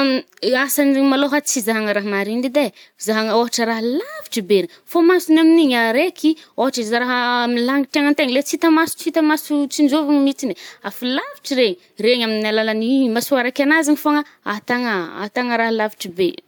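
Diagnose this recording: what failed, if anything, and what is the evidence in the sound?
Nothing failed; no audible fault anywhere in the recording.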